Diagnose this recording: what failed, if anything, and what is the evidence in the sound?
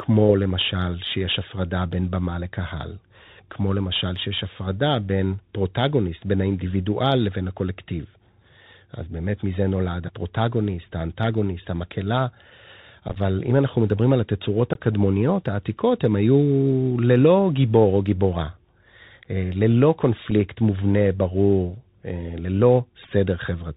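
The speech runs through the Bluetooth CVSD headset codec, which is a codec-stage fault. The link uses one-bit delta modulation at 64 kHz, so no energy passes above 4 kHz. On a spectrogram there is a hard ceiling at 4 kHz over a grainy noise floor, and the damage is plainly audible.

There is also unconcealed Bluetooth headset packet loss on the wireless link. From 13.08 to 13.18 s, about 45 ms of audio drops out in pieces scattered over 75 ms, the longest lasting about 11 ms. Another 19 ms goes between 14.73 and 14.80 s, and a 7.5 ms hole falls at 20.31 s. Each hole is one or more lost few-millisecond voice packets, filled with silence or an idle pattern instead of concealment. In the waveform these show as flat gaps with abrupt edges, and on a spectrogram they appear as thin vertical blanks.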